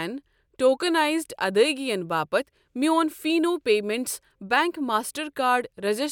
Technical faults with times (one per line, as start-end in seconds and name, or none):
none